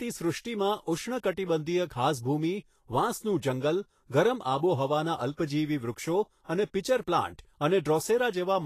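Throughout the speech, the treble sounds hissy and grainy, with blurred consonant attacks, and nothing sits above 14.2 kHz. This is likely Vorbis compression at a low rate, around 33 kbps, quantising the upper band into noise. A spectrogram shows a hard ceiling and speckled high frequencies.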